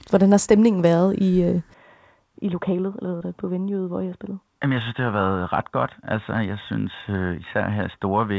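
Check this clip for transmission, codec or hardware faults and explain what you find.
Two faults are present in this speech recording: a change to a narrower-band input partway through, and one brief concealed dropout on the call link.

From 1.74 s to the end, right after "stemningen været i øh", the input switched to a poorer device, likely a headset call profile or a second microphone. Content above 3.8 kHz disappears, the level drops by roughly 10 dB, and a faint new noise floor enters, with no gap at the switch. The speech turns dull and boxy.

From 3.18 s to 3.25 s there is short concealed packet loss. About 20 ms of audio never arrived. The decoder extended the preceding sound for 26 ms and trimmed 5 ms while blending back into the real signal, leaving a brief smear in the speech. Before the switch, the call path carries content up to 8 kHz, which fits a G.722 link at around 64 kbps.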